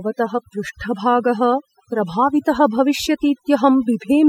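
A speech recording with overdone noise removal from start to finish: the background drops and breaks up into twinkling specks. Noise reduction set far too strongly is cutting individual frequency bands near its noise estimate, stripping quieter parts of the voice too.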